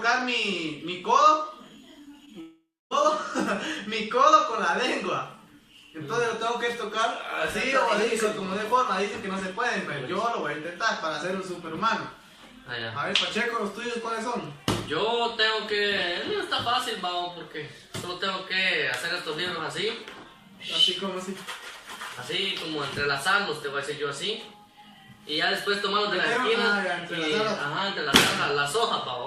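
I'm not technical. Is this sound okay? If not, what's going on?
No, there are two connection glitches close together. At 2.25 to 2.29 s there's a short concealed packet loss: a tiny chunk went missing and the receiver papered over it, leaving a quick smear. Then from 2.41 to 2.93 s you hear what's likely a long network dropout. The sound stretches into a fading buzz or hiss, goes quiet for about a quarter second, and picks up again with that half second lost.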